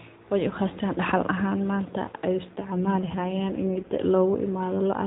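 From 2.44 s to 4.02 s an AMR rate drop makes the voice rougher, buzzier and more synthetic, which fits the codec stepping down from 12.2 to 5.9 kbps. A spectrogram keeps the same 4 kHz ceiling with no gap, but the harmonics smear.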